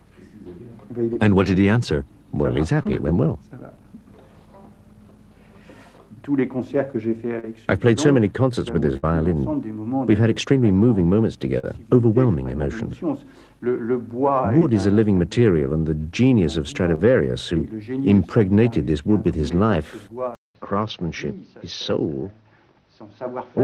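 The audio shows six short concealed packet losses, at 1.13, 2.83, 7.39, 11.59, 14.59 and 16.95 s. Each leaves a 20 to 40 ms hole that the receiver papers over by extending the preceding sound for 16 to 44 ms before crossfading back, heard as a brief smear or wobble. At 8.97 to 9.05 s a burst of packet loss removes about 60 ms: the concealment holds and fades the last sound for roughly 56 ms, then playback resumes with that stretch gone. At 20.35 s there is a 200 ms silence, after which the audio to the end is band-limited with nothing above 6.3 kHz, about 5 dB quieter, and carries a faint new noise floor roughly 40 dB down. This sudden dull, narrower character is likely the input switching to a poorer device.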